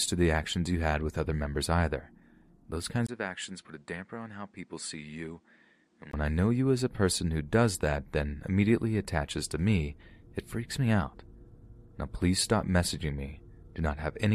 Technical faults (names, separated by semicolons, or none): input switched to a poorer device